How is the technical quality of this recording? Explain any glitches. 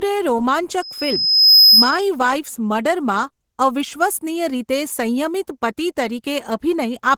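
The technical quality is poor. The speech carries coding damage throughout, and a loud feedback squeal breaks in near the start.

Low-bitrate audio saved at a high bitrate runs through the whole clip. The file is a high-quality MP3, yet the usual low-bitrate artefacts are audible. This likely comes from an earlier encoding at a very low bitrate, perhaps around 16 kbit/s, that was later re-encoded near 256 kbit/s. The second pass keeps those flaws and cannot repair them. The spectrum ends near 20.2 kHz.

A loudspeaker feedback squeal runs from 0.82 s to 2.02 s. A microphone picked up its own loudspeaker, and at 5.1 kHz the loop gain passed one. That single tone then fed itself. It swells over roughly 0.7 s into a piercing whistle. At its peak it sits about 10 dB above the speech. Then the tone stops.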